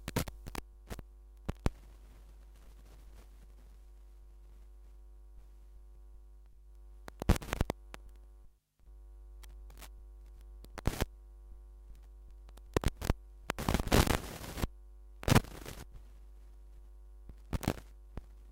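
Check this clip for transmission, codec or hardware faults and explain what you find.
One fault is present: word clock ticks. Sharp ticks recur from 1.19 s to 17.87 s, about every one and a half seconds, roughly fifteen in all. Their strength varies from tick to tick. The receiving device runs on its own clock, not locked to the sender's. The two rates differ by something like 15 parts per million. Each time they drift a full sample apart, one sample is dropped or doubled, leaving a brief click.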